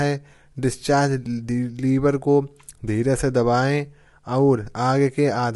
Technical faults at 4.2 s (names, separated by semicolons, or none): low-delay AAC compression